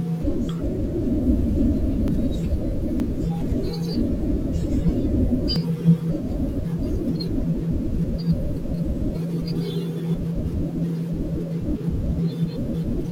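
At 2.08 s the speech jumps ahead, and it happens again at 3.0 s, 5.56 s and 8.04 s. Each one drops a chunk and splices the two sides straight together, with no gap. The one at 3.0 s loses around a tenth of a second, the others closer to 40 ms. That pattern likely comes from a dropped buffer (overrun), where the program didn't grab its samples before the hardware overwrote them.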